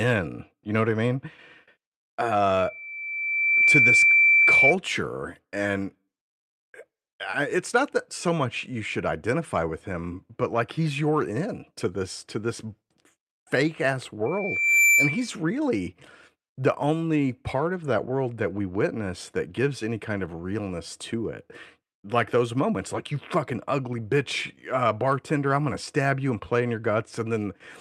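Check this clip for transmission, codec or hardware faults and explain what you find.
Loudspeaker feedback squeal occurs twice in the speech, from 2.57 to 4.76 s and from 14.26 to 15.33 s, just after "fake ass". Both times a 2.3 kHz tone swells over about a second, then half a second, to roughly 10 dB above the speech. The microphone is re-amplifying its own loudspeaker, and the loop gain is above one at that frequency. A steady interference whistle would not grow like this.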